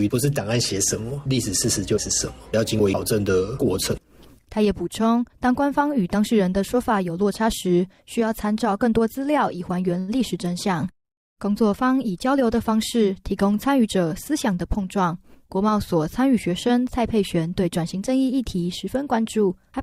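Audio of about 20 s with one short stall from a late packet, from 9.99 to 10.11 s. A packet missed its playout time and the jitter buffer ran dry, so the receiver held the last sound for about 86 ms until the packet arrived. Playback then resumed from the same point, so nothing is missing, but the held sound drags slightly with a faint buzz or dip. Everything after it runs about 86 ms later than before.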